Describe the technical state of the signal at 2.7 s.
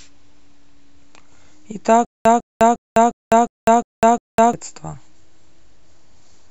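At 2.7 s the speech is caught in a stutter with silent gaps, running from 2.05 to 4.53 s. A fragment about 151 ms long plays, then about 204 ms of digital silence follows. The cycle repeats every 355 ms, seven times in all. The cause is likely a stalled player or stream that replays its last fragment at each retry before running dry. The speech that belonged in this span is lost.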